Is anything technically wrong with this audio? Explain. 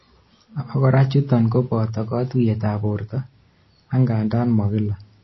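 Yes. Throughout the speech, the treble is likely cut by MP3 compression under a tight bit budget. The encoder stops spending bits above a fixed point, and it drops quiet frequency lines that flicker in and out between frames. The damage is plainly audible: the speech sounds dull and watery, s sounds turn swirly and metallic, and attacks smear, which fits a very low bitrate of around 24 kbps.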